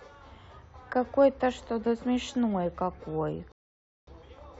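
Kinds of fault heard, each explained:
rebuffering stall: The player used up its downloaded audio and had to wait for more data. The speech cuts to silence at 3.52 s and picks up again at 4.07 s exactly where it stopped, adding about 0.55 s without losing anything.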